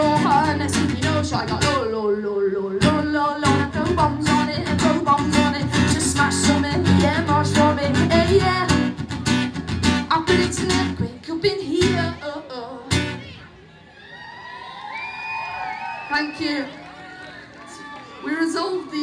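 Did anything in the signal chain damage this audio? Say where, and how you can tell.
No, nothing in the signal chain stood out as a problem on listening.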